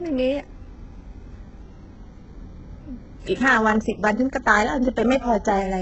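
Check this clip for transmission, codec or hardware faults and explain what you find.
One codec fault runs through the whole speech clip. Throughout, the likely cause is HE-AAC compression at a bitrate near 8 kbps: the treble is rebuilt from copied lower bands, so s sounds turn gritty and lispy. On a spectrogram, the treble shows as smeared, repeated patches that stop at a hard ceiling at 8 kHz.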